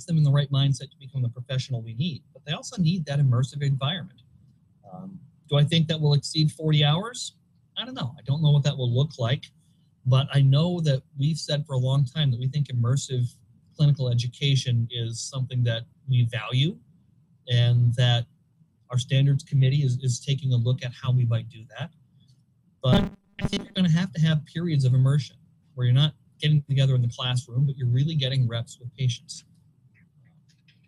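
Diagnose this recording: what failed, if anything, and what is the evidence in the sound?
Robotic sound from repeated short buffers, 22.93 to 23.77 s: a rigid 200 Hz buzz, harmonic comb on a spectrogram, waveform cycling every 5 ms, likely driver buffer underrun.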